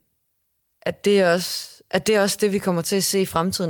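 Clock drift between sender and receiver runs through the whole speech clip. The sender's clock runs about five percent fast, so the receiver's buffer keeps overfilling.

Repeated timing corrections follow from 0.03 s to 3.69 s. The receiver keeps dropping small slivers to catch up with the 105 percent rate. These cuts come at uneven gaps and sound like faint hiccups in the tempo.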